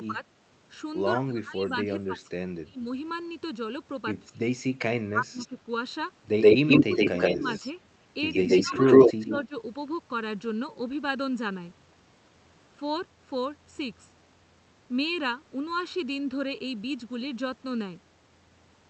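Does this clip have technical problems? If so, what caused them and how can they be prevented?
Yes. There are three kinds of fault.

The first is channel delay, heard as comb filtering. It runs through the whole clip. One channel lags the other by about 0.7 ms, and the two are summed to mono. Sound common to both cancels at evenly spaced frequencies. The first notch sits near 700 Hz, and more follow higher up. The result is a hollow, phasey tone. Align the channels before mixing down, or send only one channel.

The second is speech suppressed in double talk. The level dips at 0.07 to 0.24 s, 1.2 to 2.85 s, 4.27 to 5.57 s, 6.53 to 7.65 s and 8.62 to 9.54 s. The deepest drops reach about 25 dB. The likely cause is an echo canceller that turned down the talker while the far side spoke, mistaking the overlap for echo. Headsets, or a canceller tuned for full-duplex speech, prevent this.

The third is echo leak. 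A delayed copy of the talker appears 126 ms behind. At 5.38 to 5.48 s it is faint, about 15 dB below the speech. From 6.41 to 9.46 s it is strong, about 10 dB above the speech. This likely comes from a loudspeaker on the far end whose canceller failed to remove its own pickup. Using headphones there, or lowering speaker volume, prevents it.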